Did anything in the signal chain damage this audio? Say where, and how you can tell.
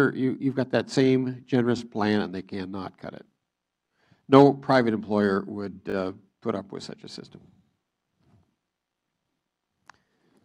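Yes. Repeated buffer at 5.9 to 5.94 s, driver stage: a short chunk, fitting a 20 ms buffer, sounds three times with hard joins because audio arrived late.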